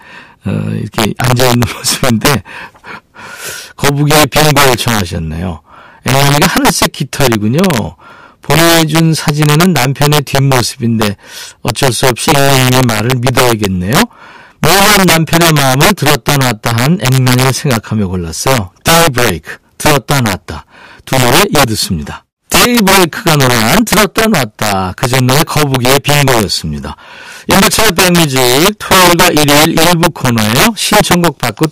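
From start to finish, the speech carries integer overflow: with the signal driven about 9 dB too hot, a few percent of samples exceed the largest integer and wrap to the opposite sign instead of being held at the limit. Every loud peak therefore snaps across the full range, heard as violent cracks far harsher than clipping. On the waveform, peaks jump from top to bottom rail; the spectrogram shows broadband vertical streaks at each loud syllable.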